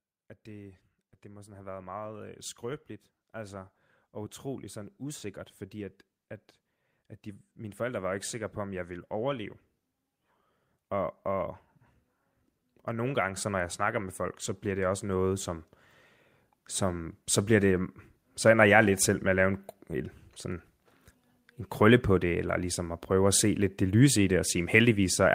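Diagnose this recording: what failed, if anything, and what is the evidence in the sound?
The call-processing stage failed: its automatic gain control kept judging the input too quiet and raising its gain, so there are three episodes of automatic gain rising. The level climbs slowly by about 7 dB from 0.46 to 6.03 s, about 4 dB from 7.0 to 9.55 s, and about 6 dB from 12.86 to 15.74 s. Because the gain acts on the whole signal, the speech and the background noise swell together.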